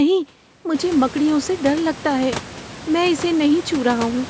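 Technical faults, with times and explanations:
No technical faults are present in this clip.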